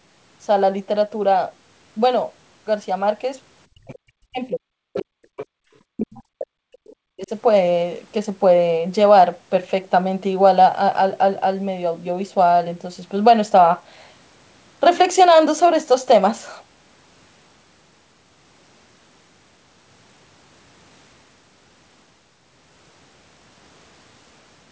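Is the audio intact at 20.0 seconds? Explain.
Yes, at 20.0 seconds the speech is intact, with no fault heard at that moment.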